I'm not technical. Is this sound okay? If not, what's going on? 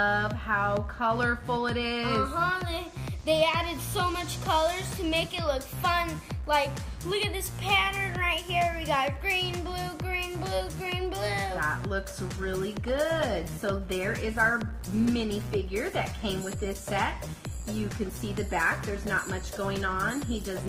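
No. At 12.34 s the stream switched to a lower-quality version because the connection slowed, which is called an adaptive stream at a lower bitrate. From there to the end, the sound abruptly gets rougher and smeared, with no gap.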